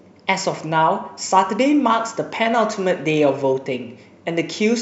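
No technical faults can be heard anywhere in this speech recording. The audio runs without any dropout, glitch or distortion breaking into it.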